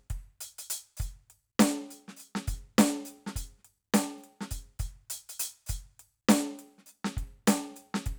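No technical faults can be heard in this music.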